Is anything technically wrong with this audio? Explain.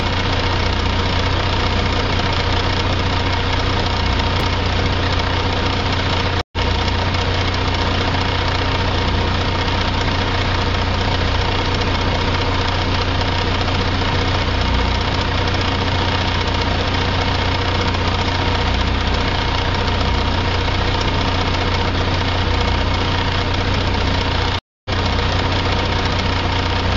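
Yes. There are two kinds of fault: a reordered chunk early on and two dropouts where the stream reconnects.

At 4.4 s there are chunks out of order. One very short piece of audio, about 5.33 ms long, is played one chunk too late. It lands after the piece that should follow it. Nothing is missing, but the sequence is swapped. That leaves three hard joins packed into a tiny span. The result is a brief jumbled blip.

At 6.41 s and 24.59 s there is a stream reconnect. The connection drops, and the player falls silent. It reconnects and starts a new decoder partway through the stream. The first gap lasts 111 ms, and the audio returns roughly 100 ms further on. The second gap lasts 260 ms and skips ahead by about 300 ms. Each is heard as a sudden hole, then a jump forward in the sound.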